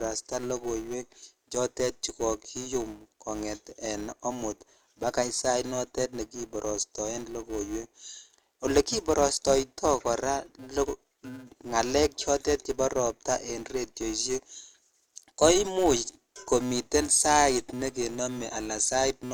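Speech with a filter restarted on every block throughout: a 375 Hz buzz, fitting a 128-sample block, that swells and fades with the speech, unlike mains hum, which stays constant in silence.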